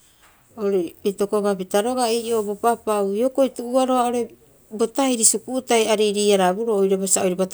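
No technical faults can be heard anywhere in the speech, so there are none to describe in time order.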